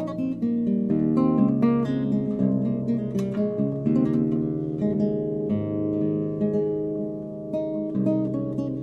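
No technical faults can be heard anywhere in the audio. There is no moment in it that calls for a time stamp or a closer look.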